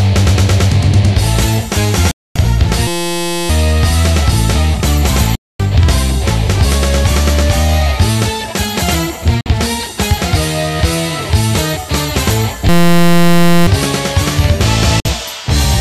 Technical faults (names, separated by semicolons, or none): digital broadcast dropout; system hang loop